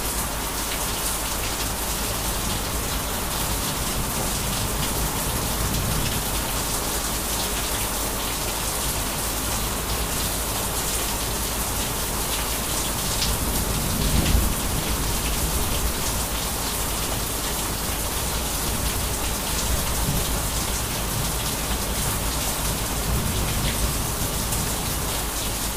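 Nothing goes wrong anywhere in this recording; there's simply no technical fault to point to, at any moment.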